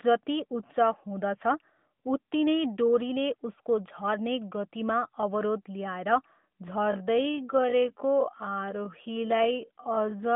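Time-stretched section, from 6.78 s to the end at 10.36 s: the pace suddenly drops to about 0.54 times normal speed while the pitch holds steady. The slowed stretch drags. This is likely the work of software lengthening the audio without shifting pitch by repeating small slices. The narrowband phone-line sound of the AMR codec, with nothing above about 3.7 kHz, carries straight through the change.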